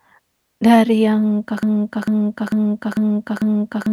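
At about 1.63 s the speech falls into a broken-record loop: a fragment roughly 0.45 s long plays five times back to back, identical each time, and it doesn't let go until the clip ends. You get a stuttering, rhythmic repeat instead of the rest of the sentence, so whatever should have followed is simply gone. Most likely the player or stream stalled and kept replaying the last chunk it had buffered.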